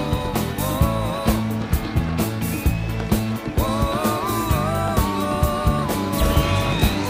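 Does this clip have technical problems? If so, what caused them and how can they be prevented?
No, nothing in this recording points to a technical fault, so there is no cause to trace and nothing to prevent.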